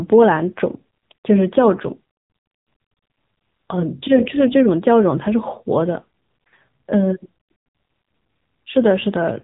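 From start to finish the speech carries AMR narrowband mobile codec damage, and it is plainly audible. Nothing above 3.8 kHz survives. The voice is rebuilt from a vocal-tract model driven by sparse pulses, which gives it a buzzy, synthetic edge that fits one of the lower AMR-NB modes, around 8 kbps. A simple low-pass filter would only dull the top end. Here the voice itself sounds coarse and artificial, the mark of heavy low-bitrate speech coding.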